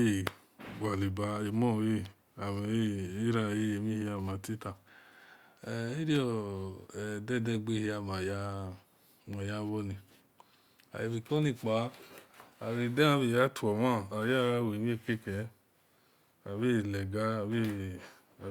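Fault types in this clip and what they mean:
Nothing to list here: the speech comes through with no dropouts, glitches or other technical faults to point to.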